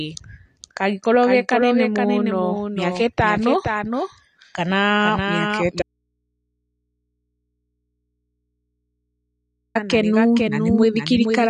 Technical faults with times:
0.00-11.50 doubled audio track
0.00-11.50 AAC compression
5.82-9.75 audio dropout to a faint residue

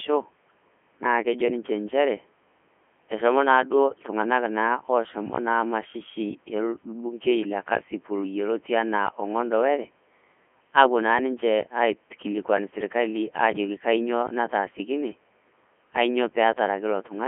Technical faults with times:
0.00-17.28 Codec 2 vocoder

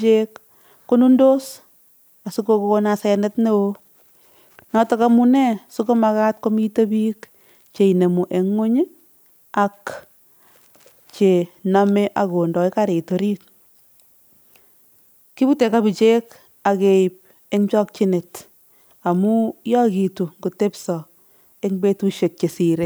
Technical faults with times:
0.00-22.85 low bit depth with noise shaping

